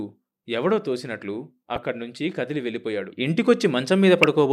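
At 1.76 to 1.78 s and again at 4.23 s the speech picks up a brief burst of noise blips, the sound of DAB burbling. Weak reception let bit errors of around 0.1 to 0.15 percent slip past error correction, corrupting samples into short noise blips and scale factors so individual sub-bands leap in level for up to a frame. Unlike a dropout, and unlike steady codec swirl, it comes as short blips.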